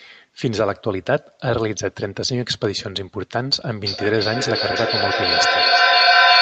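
Feedback echo between two devices starts at 3.85 s and runs to the end of the clip. A second device in the same room is playing back this microphone's signal, and the microphone picks it up again. Each device's echo canceller removes only its own playback, so this loop goes uncorrected. The sound returns roughly every 300 ms, thinner and more ringing on each pass. The loop is loud enough that the repeats pile up rather than fade, reaching about 7 dB above the speech.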